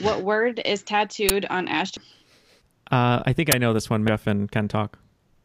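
A speech recording with two kinds of fault, each occurring twice. At 1.29 s and again at 3.52 s there is an uninitialised buffer: for about 12 ms the output plays a block that was never filled with audio, so leftover memory comes out as a sudden loud crack. The length fits a 512-sample buffer. On a waveform each shows as a short slab that ignores the surrounding speech envelope, and on a spectrogram as a narrow vertical stripe of energy across the whole frequency range. The other fault is damaged data in a compressed stream, from 1.97 to 2.00 s and again at 4.08 s. Corrupted bytes make the decoder misread frames and lose sync until it finds a valid header, which produces a brief chirp or blip. On a spectrogram these appear as small smeared patches or odd tonal fragments that break the speech harmonics, and on the waveform as a sudden change in the signal's shape.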